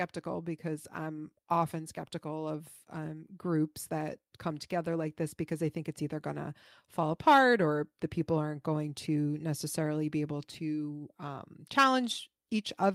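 Nothing in this speech recording stands out as a technical fault, so there's no moment here that needs pointing out.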